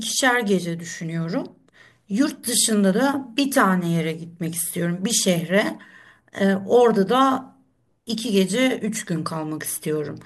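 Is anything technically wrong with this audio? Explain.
No, nothing is technically wrong with this audio.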